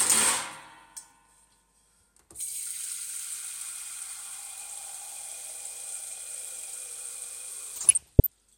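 From 7.73 to 8.27 s the sound breaks into DAB burbling. Weak reception lets bit errors slip past the error correction, at a rate below one percent. Corrupted samples put short blips of noise in single sub-bands, and corrupted scale factors make sub-bands jump in level for up to a frame.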